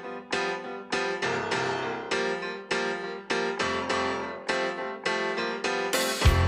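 Nothing goes wrong anywhere in this clip; the sound runs along steadily without a single glitch, dropout or hiccup to point to.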